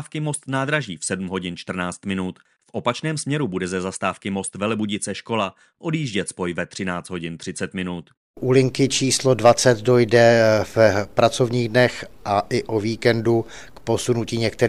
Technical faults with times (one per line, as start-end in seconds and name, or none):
none